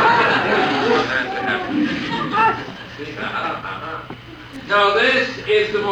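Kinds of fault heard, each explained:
Loose connector crackle: a short, ragged burst of scratchy crackle sits from 4.53 to 4.61 s, lasting under a tenth of a second. That's the sound of a worn or grubby contact somewhere in the cable or jack making and breaking connection as it shifts, so the signal gets chopped on and off in quick, uneven bursts. Any DC sitting on the line turns each break into a little pop.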